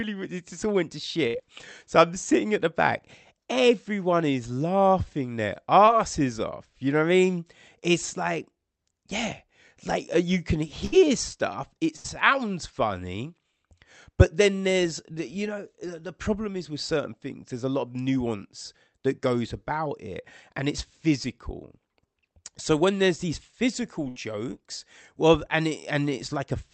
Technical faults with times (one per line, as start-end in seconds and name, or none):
1.27-1.36 burst of packet loss
5.86-5.89 short concealed packet loss
10.85-10.94 burst of packet loss
11.96-12.06 burst of packet loss
24.08-24.18 burst of packet loss